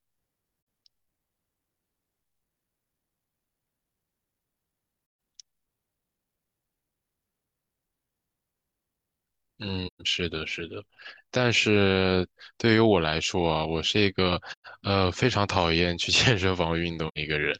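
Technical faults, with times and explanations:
0.58, 5.01, 9.87, 14.52 and 17.08 s, AAC frame loss with muting: Blocks of coded audio went missing, and the decoder zeroed their spectrum rather than concealing it. The speech drops into silent gaps of 85, 171, 128, 128 and 85 ms, which fits losses of two to four AAC frames. The overlapping transform windows fade each gap out and back in, so the holes have soft edges.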